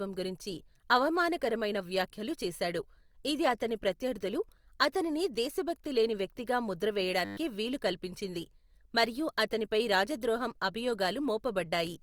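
Speech clip with a system hang loop from 7.25 to 7.37 s, between "దేశభక్తి లేని వ్యక్తిగా ముద్ర" and "వీలు కల్పించింది మరియు అతనిపై": a frozen 10 ms buffer repeats twelve times, giving a 100 Hz buzz. On a waveform the same cycle is tiled exactly, and a spectrogram shows evenly spaced harmonic lines.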